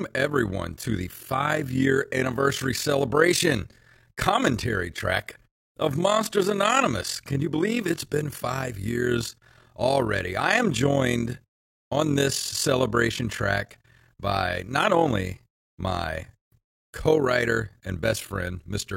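Overlap-add ripple runs throughout the speech: it was split into windowed frames and rebuilt with overlaps that never sum to a steady gain, so the level pumps by about 11 dB roughly 40 times a second, a rough, robotic flutter.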